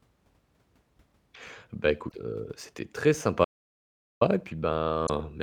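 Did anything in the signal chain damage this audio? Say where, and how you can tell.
Yes, at the codec stage: at 2.08 to 2.12 s, just before "heu c'était très", and again at 5.06 to 5.09 s, the sound skips ahead with a brief glitch. That's likely a broken MP3 bit reservoir, where frames went missing and the next roughly 26 ms frames decoded someone else's bytes.

Further on, from 3.45 to 4.21 s, right after "heu c'était très", the audio drops to dead digital silence for about 0.77 s, with no room tone at all. That's an audio dropout to silence, likely the input vanishing while the recorder kept writing silence.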